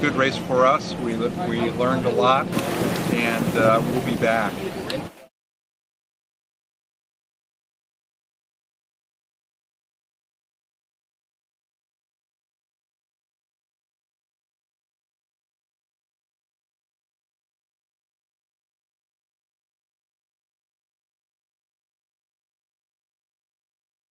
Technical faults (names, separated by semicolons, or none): none